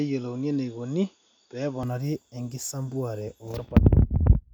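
From the start to 1.83 s the speech is dull and a little quieter, with nothing above 6.9 kHz and a faint new noise far below it, which likely points to an input switched to a poorer device. Band, level and noise all change together, with no gap, unlike a simple filter.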